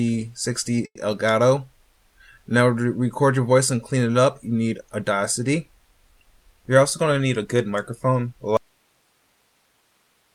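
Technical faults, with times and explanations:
0.85 to 0.98 s, call audio freeze: a brief fading buzz or hiss then about 60 ms of silence, likely from late packets emptying the jitter buffer; sound resumes where it stopped, adding 100 ms delay.
7.05 to 8.13 s, jitter buffer speed-up: playback runs about 9% fast at unchanged pitch as short pitch-period slices, roughly a tenth of a second in total, are cut to shed excess delay.
8.57 s to the end, audio dropout to a faint residue: the signal cuts off abruptly, leaving only hiss some 40 dB down, likely a lost input with the downstream path still live.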